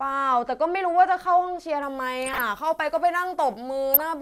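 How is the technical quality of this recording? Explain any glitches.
Two faults spoil the speech from 1.83 s on.

Pre-emphasis left on runs from 1.83 s to the end. The treble lift matches the FM 75 µs curve, and the complementary de-emphasis was never applied, so 10 kHz sits about 13 dB above 1 kHz. The sound turns thin, bright and hissy, with harsh sibilants. On a spectrogram the upper bands brighten abruptly at 1.83 s and slope upward with frequency. The waveform looks spikier.

DAB burbling occurs twice, at 2.25–2.42 s and at 3.94–4.02 s. Under weak reception, bit errors at a rate of roughly half a percent get through the error correction and corrupt the MP2 samples, putting short blips of noise into single sub-bands. The result is short blips of noise laid over the speech. A spectrogram shows scattered rectangular blocks in the affected bands, and the waveform shows brief irregular bursts.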